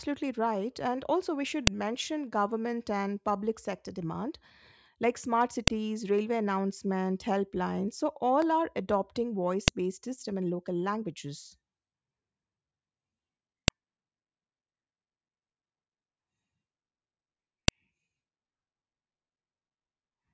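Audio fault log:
1.67, 5.68, 9.68, 13.68, 17.68 s: file header played as audio. Unstripped WAV header bytes in joined 4-second pieces snap loudly at every boundary, regardless of the speech, unlike random clicks.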